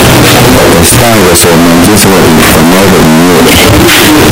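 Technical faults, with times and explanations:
Throughout: signed and unsigned mixed up. The speech comes with very loud, harsh distortion from start to end. Quiet moments are as loud as the rest, so there is no real silence anywhere. The likely cause is samples read with the wrong sign convention, which fits 16-bit audio. The top bit gets flipped. Every zero crossing then turns into a jump across the whole range, and that grinding edge rides on everything.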